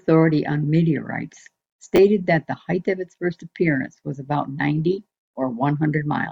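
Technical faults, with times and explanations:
1.96–1.98 s, chunks out of order: a brief jumbled flicker, as one 10 ms chunk plays a chunk late, creating three hard joins.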